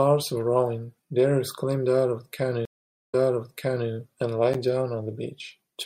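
At 2.65 s the speech drops out for 455 ms, then resumes 0.79 s earlier, repeating material: a stream reconnect, where a fresh decoder restarted mid-stream after a resent burst.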